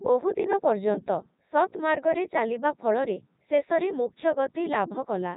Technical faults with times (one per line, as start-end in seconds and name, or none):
0.00-5.36 Codec 2 vocoder